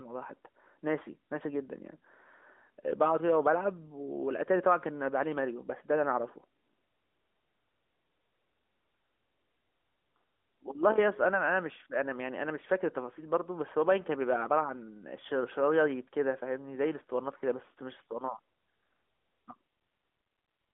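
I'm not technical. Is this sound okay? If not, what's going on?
Yes, nothing goes wrong in this recording; it just has the narrower sound of an ordinary mobile phone call, which is how phone lines normally carry it.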